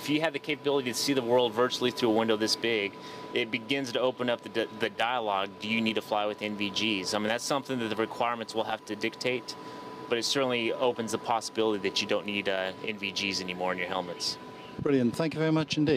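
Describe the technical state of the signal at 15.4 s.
Around 15.4 s the signal is intact, with no dropout, clipping, glitch or other fault at that point.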